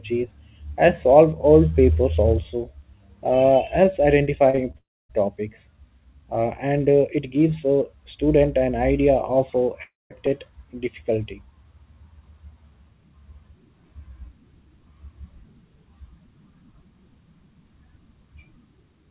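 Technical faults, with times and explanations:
4.50–4.55, 4.55–4.59 and 4.71–4.76 s, short concealed packet loss: three tiny gaps, each 20 to 40 ms, just before "topics uh and uh". The receiver covered each hole by extending the preceding sound for roughly 20 to 33 ms, then blended back into real audio, so each one is heard as a quick smear or wobble. Unlike a dropout, nothing fades to silence.
4.78–5.11 and 9.83–10.12 s, long network dropout: at 4.78 s, right after the last short loss, the speech turns into a decaying buzz or hiss and then goes silent for about a quarter of a second. At 9.83 s, after "an idea of uh", the same thing happens with about 0.2 s of silence. Speech then resumes further on, with roughly 0.3 s of audio absent each time. The likely cause is a stretch of packets that never arrived. The concealer could only stretch the last sound briefly before giving up, so these gaps fall to silence where the short losses sound smeared. 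All of this sits on a narrowband call path with nothing above 4 kHz, which fits G.711 A-law at 64 kbps.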